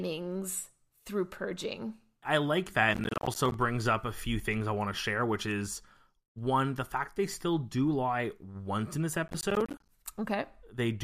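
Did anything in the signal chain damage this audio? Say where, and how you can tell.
Yes. Two bursts of gritty, tearing crackle ride on the speech, from 2.94 to 3.54 s, between "purging I like that" and "up a few things", and again from 9.28 to 9.89 s, just after "lie once in this". This is processor overload crackle at the driver or buffer stage. The processor missed a run of deadlines for buffers of around 10 ms. Each missed buffer became a short hard-edged silence, and a couple of dozen dropouts in quick succession merged into crackle that ends when the load clears.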